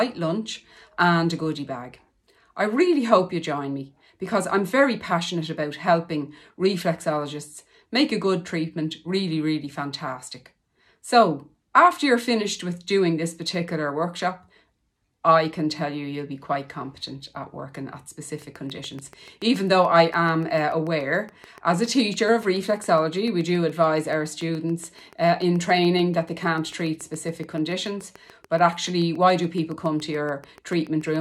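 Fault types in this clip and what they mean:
Train of clicks: a steady run of near-identical pulses at 7 per second from 18.4 s to the end, around a hundred in all, peaking about as loud as the sound and ticking through pauses too, likely from nearby equipment interference or a faulty connection or power supply.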